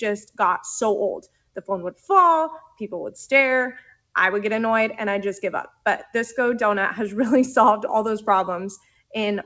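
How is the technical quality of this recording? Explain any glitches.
The quality is compromised by a speech noise suppressor acting on non-speech sound. Level dips recur. The call path tops out at 8 kHz, which fits a G.722 call codec.

A noise suppressor applied to music or sounds runs throughout. It treats steady tones, ambience and tails as noise. So it keeps pulling them down, with level swinging by about 5 dB. Held sound pumps and thins, while attacks mostly pass.

Sound cut by the noise suppressor occurs five times: 1.26 to 1.62 s (about 21 dB), 2.65 to 2.80 s (about 13 dB), 3.81 to 4.11 s (about 22 dB), 5.70 to 5.85 s (about 17 dB), and 8.78 to 9.14 s (about 21 dB). Here the suppressor judged the sound as noise. Sustained parts sink or decays get chopped.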